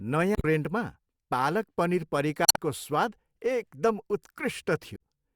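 At 0.33 to 0.45 s, 2.45 to 2.58 s (between "पालक पनीर" and "स्वाद एकदम", adding about 24 ms) and 4.92 to 4.99 s, the speech gets short glitches from damaged data in a compressed stream: the decoder misreads corrupted frames, loses sync and hunts for the next header.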